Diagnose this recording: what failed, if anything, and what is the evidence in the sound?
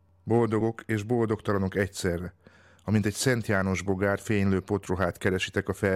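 At the codec stage, compressed frames were skipped in this speech at 2.26 s: the audio jumps ahead by about 40 ms of material, so a short stretch of the sound is simply gone rather than silenced. That distinguishes it from a buffer underrun or sample dropout, which inserts silence or leaves a hard click at the discontinuity.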